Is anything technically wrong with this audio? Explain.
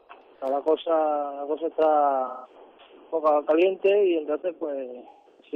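Yes, there's AAC frame loss with concealment at 2.27–2.55 s and again at 5.09–5.53 s. The decoder patches missing frames from the last good spectrum, so both spots go smeared and phasey. The late one is a scattered cluster with runs up to around 150 ms.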